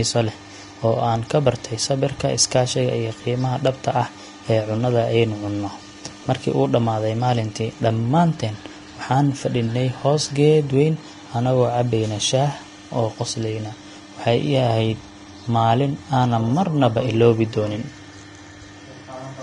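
Vorbis compression runs throughout the speech, from the first second to the last. Nothing survives above about 10.6 kHz, and the remaining treble sounds hissy and grainy, with roughened vowels and softened consonant attacks. The likely cause is a low-quality Vorbis encode, consistent with a bitrate near 33 kbps: the encoder lowered its cut-off and quantised the upper band so coarsely that fine detail was replaced by noise of similar energy.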